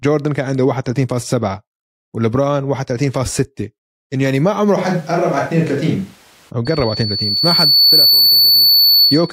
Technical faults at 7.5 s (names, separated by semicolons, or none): loudspeaker feedback squeal